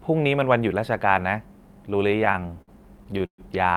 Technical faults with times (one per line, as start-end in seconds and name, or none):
2.11-3.41 repeated stalls (stutter)